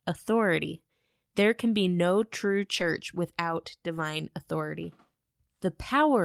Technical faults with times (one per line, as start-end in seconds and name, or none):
1.85-1.87 lost packet rebuilt from error correction
2.79-2.81 lost packet rebuilt from error correction
3.97-4.03 lost packet rebuilt from error correction